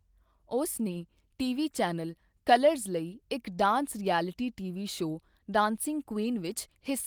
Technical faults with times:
none

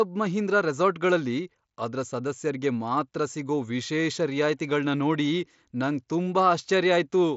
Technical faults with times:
none

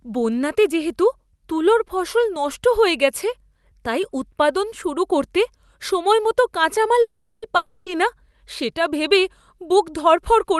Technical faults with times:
7.01-7.44 call audio freeze
7.56-7.88 long network dropout

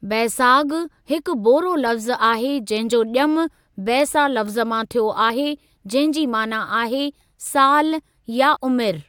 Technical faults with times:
5.29 damaged data in a compressed stream
8.55 damaged data in a compressed stream

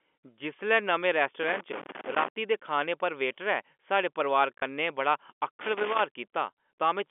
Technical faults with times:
1.43-2.28 loose connector crackle
4.58-4.62 packet loss with last packet repeated

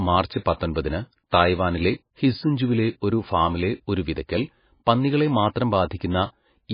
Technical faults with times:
0.00-6.74 MP3 compression

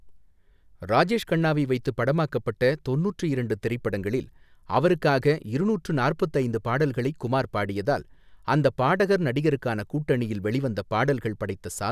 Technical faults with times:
none

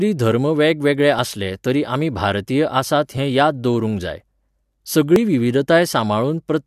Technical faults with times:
1.19 overlap between stream segments
3.17 overlap between stream segments
5.16 overlap between stream segments

